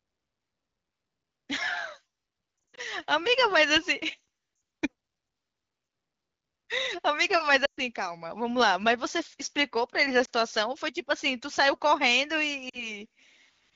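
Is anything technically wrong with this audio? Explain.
Yes. The speech has lost AMR speech frames at 2.70 to 2.80 s, 4.55 to 4.61 s, 7.65 to 7.80 s, 10.25 s and 12.69 to 12.90 s. Frames failed their checks, so the decoder repeated the last good pitch and vocal tract settings at falling gain. Each gap briefly warbles or dips, with longer runs falling to near silence, then the speech returns rough. The wideband voice sounds clean between gaps.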